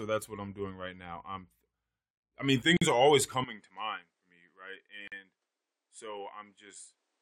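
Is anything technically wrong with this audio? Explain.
Yes. There are two gaps at a join of encoded pieces, at 2.77 to 2.82 s (after "I mean", before "are always") and at 5.08 to 5.12 s. Separately encoded segments were spliced with their encoder padding left in, so silences of about 47 and 44 ms cut into continuous speech. At 3.44 s, after "are always", the input was likely switched to a poorer device. From there to the end, nothing is heard above 10.5 kHz, the level is about 10 dB lower, and a new noise floor sits roughly 45 dB down, all with no silence at the switch.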